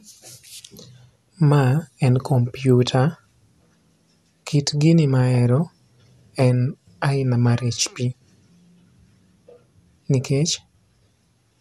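From start to finish the speech sounds swirly and hollow, with a smeared, watery texture and softened consonant attacks, and nothing comes through above 12.6 kHz. That's generation loss, likely from the audio going through a lossy codec about four times over. Each re-encode quantises on a shifted frame grid, so the noise piles up. The character points to MP2 at around 128 kbit/s, yet it sounds rougher than that bitrate alone would.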